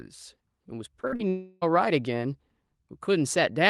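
At 1.01 to 1.05 s the speech hits a short concealed packet loss. About 20 ms of audio failed to reach the decoder in time, and the receiver bridged the gap by continuing the preceding sound before blending back in. It is heard as a brief smear or wobble. It differs from a burst because the fill is short and never fades, so the speech carries straight on.

From 1.07 to 1.14 s comes a burst of packet loss. Roughly 40 ms went missing in a row and was replaced by about 45 ms of extended sound that is turned down as it runs. This gives a short held buzz or fading hiss, then the speech resumes slightly further on. The audible decay and the skipped stretch are what separate it from the lighter concealment on either side.

At 1.16 to 1.21 s there is a second short concealed packet loss, covering about 40 ms of missing audio. It is again a quick smear that joins smoothly back into the real signal.

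From 1.29 to 1.63 s a longer gap, likely a long network dropout, removes about 320 ms of audio. The receiver fills the whole stretch with continued sound, and no true silence is reached. This makes it an extended buzz or hiss that fades rather than a blip, and the speech picks up afterward with that portion lost.

Throughout, the call path limits the audio to about 12 kHz, which fits Opus at around 32 kbps.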